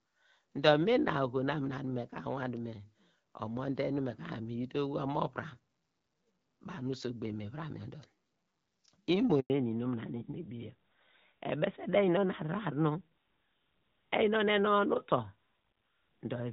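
At 9.40 s the audio cuts out in a handover gap: the call was being moved between networks, and for 0.1 s no frames arrived, so the sound decays within a few tens of milliseconds into true silence until the new link picks up at 9.50 s. On a waveform this is a brief flat line after a short fade; a spectrogram shows a narrow vertical strip empty across every frequency.

From 9.50 s to the end, a fallback to narrowband takes over. Before the gap, the AMR wideband (HD Voice) codec carries energy up toward 7 kHz with only light coding roughness, consistent with a rate around 12.65 kbit/s. After the switch the link apparently drops to an older narrowband AMR codec, and everything above 4 kHz is gone. The speech turns duller and muffled, with sibilants losing their hiss. On a spectrogram, the upper band goes blank at 9.50 s, leaving a hard horizontal ceiling at 4 kHz for the rest of the clip.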